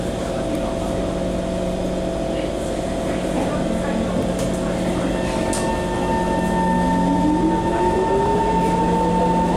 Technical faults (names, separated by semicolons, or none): dropped buffer (overrun)